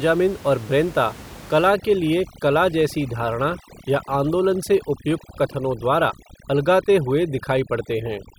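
From 1.68 s, just after "और ब्रेंता", to the end, overdone noise removal cuts any frequency band near its noise estimate, taking quiet speech detail with it. The room noise, about 19 dB below the speech, collapses into twinkling near-silence.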